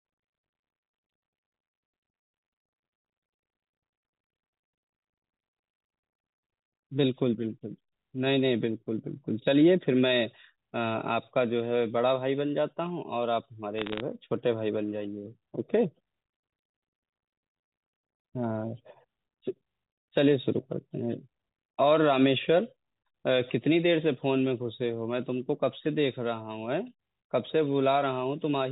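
Bit errors on a digital phone line occur from 13.78 to 14.01 s, where roughly half a percent of bits in the G.711 mu-law stream flip. Each flipped bit corrupts one sample. Hits on sign or high-order bits give sharp ticks, heard as a brief crackle over the speech.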